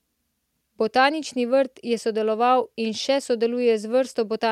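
Nothing stood out on listening to the speech in this recording.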